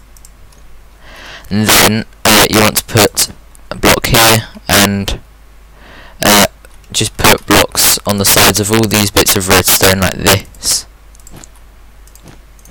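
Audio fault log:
1.69–1.88 s, 2.25–3.23 s, 3.85–5.08 s, 6.23–6.45 s, 7.24–10.34 s and 10.70–10.73 s: integer overflow. Loud peaks push past the integer ceiling, by about 11 to 17 dB mostly (only about 1 dB at 10.7 s), and wrap to the opposite sign instead of being held at the limit. Every wrap is a full-scale jump, so you get violent cracks, much nastier than plain clipping.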